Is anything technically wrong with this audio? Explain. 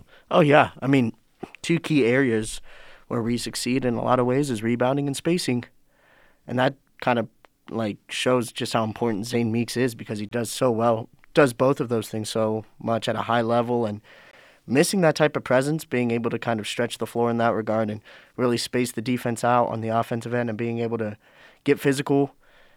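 Yes. The speech has gaps between stream segments at 10.29–10.32 s, 14.31–14.33 s and 18.33 s. Segment timestamps leave holes of about 26, 19 and 4 ms on 2-second boundaries, which the player fills with silence. Each one is a brief hard-edged dropout, seen as a flat near-silent slice in the waveform and a thin blank vertical stripe on a spectrogram.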